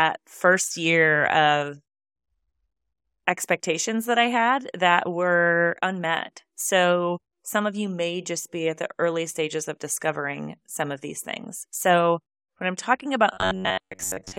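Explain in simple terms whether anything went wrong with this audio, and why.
Robotic sound from repeated short buffers starts at 13.34 s, right after "when I'm talking about", and lasts to the end. It's likely that fresh audio arrived too slowly, so a scrap of about 11 ms was replayed over and over, forcing a rigid, metallic buzz near 94 Hz.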